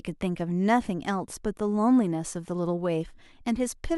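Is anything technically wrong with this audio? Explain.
No, nothing technically wrong turns up anywhere in this speech recording.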